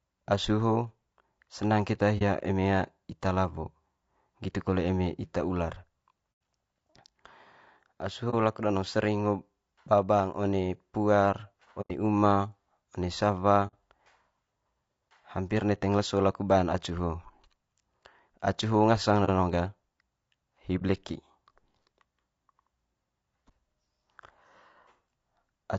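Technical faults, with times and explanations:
throughout, low-delay AAC compression: the speech sounds rough and grainy, with a hiss filling the spaces between harmonics and a thin, somewhat synthetic top band. This is likely low-delay AAC (AAC-ELD), where short frames separate pitch harmonics poorly and leave few bits for each one, at a rate that fits about 32 kbps. On a spectrogram the harmonic stripes look smeared and noisy, and the upper band is patchy.
2.18–2.22, 6.32–6.41, 8.30–8.35, 11.81–11.91, 13.67–13.74, 19.25–19.30 and 20.78–20.82 s, AAC frame loss with muting: seven brief holes open in the sound. They last 30 ms, except the ones at 6.32 s (just after "kole eme ita ular") and 11.81 s (between "ba bang one puar" and "uma one"), which last 90 ms, and the one at 13.67 s, which lasts 60 ms. The 8.30 s gap comes just before "laku danong". The decoder zeroed the lost spectrum, and overlapping windows taper the edges, so the holes fade out and in softly. 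The waveform shows a soft dip toward silence, and the spectrogram shows a thin blank vertical strip.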